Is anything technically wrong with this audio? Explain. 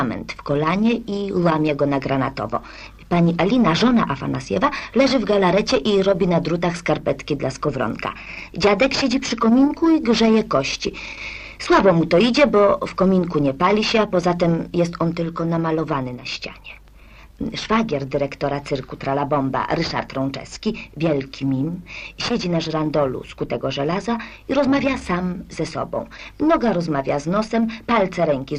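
No, nothing technically wrong stood out on listening to this audio.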